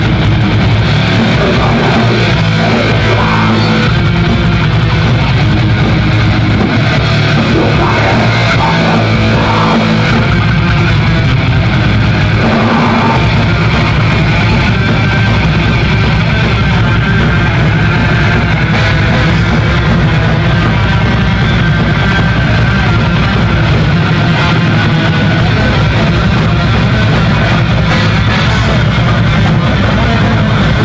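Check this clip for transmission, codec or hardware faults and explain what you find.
Nothing in the transmission, codec or hardware path calls for a fix; no faults found.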